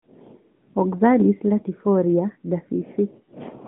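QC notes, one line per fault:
No fault to log for this clip.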